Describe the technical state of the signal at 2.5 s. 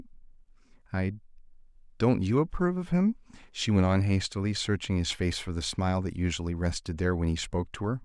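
At 2.5 s the signal is intact, with no audible technical fault at that point.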